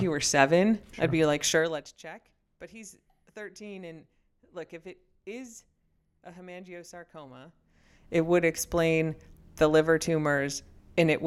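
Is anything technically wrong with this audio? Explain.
Yes, there is zipper noise from 1.51 to 1.95 s. A gain reduction of roughly 20 dB is applied in a series of discrete jumps, about 200 per second, rather than as a continuous ramp, so each jump puts a tiny discontinuity into the waveform. Over that stretch of speech, those small clicks run together into a fine ticking buzz that rides on the sound as it fades down.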